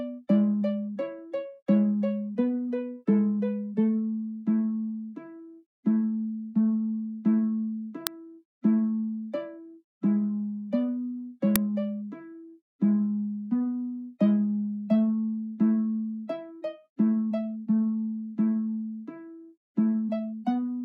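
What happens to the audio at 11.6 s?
At 11.56 s an uninitialised buffer plays, reading leftover memory as roughly 2.7 ms of samples heard as a loud crack, which fits a 128-sample buffer. It appears as a sharp waveform spike and a broadband vertical stripe.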